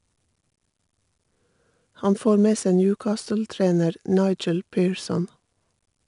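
A gritty hiss rides on every louder stretch of the speech from start to finish, roughening sharp onsets, and nothing sounds above 10.6 kHz. This is 4-bit ADPCM compression: each sample is coded as a coarse predicted step, and the rate points to about 89 kbps.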